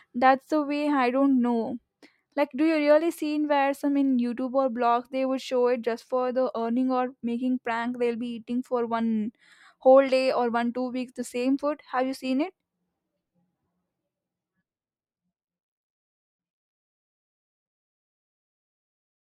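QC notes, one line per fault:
No technical faults turn up in the speech, and the level eases down in a smooth editorial fade-out that begins around 14 s and ends at 19.2 s without any click or hard edge.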